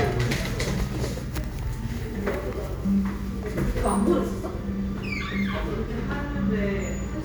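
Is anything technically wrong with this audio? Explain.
No, nothing here sounds technically off; these sounds come through without any audible problem.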